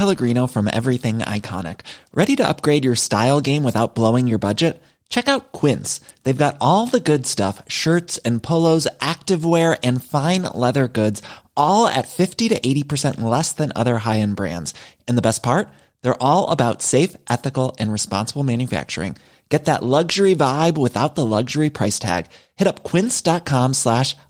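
No technical faults can be heard anywhere in the speech. The Opus voice compression leaves only light coding traces, and the sound keeps its full bandwidth, which fits hybrid coding at around 24 kbps.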